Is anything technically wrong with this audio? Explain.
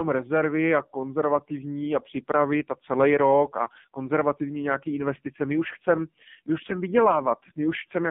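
Yes. Throughout, this speech has passed through the AMR narrowband mobile codec. At a low rate, around 5.9 kbps, nothing above about 3.5 kHz survives, and the voice sounds heavily buzzy and synthetic.

At 3.64 s, after "připravit a celý rok", there are lost AMR speech frames. One 20 ms frame failed, and the decoder reused old settings. The result is a brief dip or warble before "konzervativní nějaký investice".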